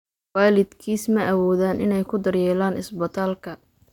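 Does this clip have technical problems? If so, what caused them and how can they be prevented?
No, nothing in this speech recording points to a technical fault, so there is no cause to trace and nothing to prevent.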